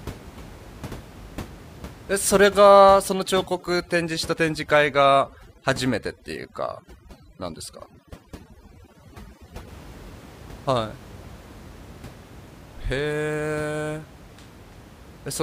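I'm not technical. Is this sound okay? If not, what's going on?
No. Between 3.09 and 9.68 seconds there's overdone noise removal: a tool set too strong leaves the voice over sparkly near-silence.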